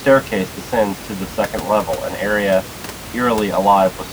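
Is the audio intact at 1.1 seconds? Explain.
Yes, the audio is intact at 1.1 s, with only the room's background noise, about 15 dB below the speech, audible as part of the recording.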